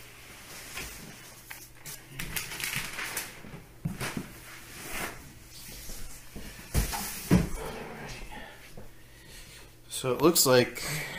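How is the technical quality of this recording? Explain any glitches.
Listening closely, nothing in the recording stood out as a technical problem, and there are no glitches to explain.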